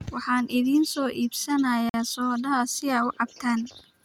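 At 1.89 s a gap between stream segments drops in about 47 ms of hard-edged silence where segment timing leaves a hole; unlike a dropout, no speech is lost.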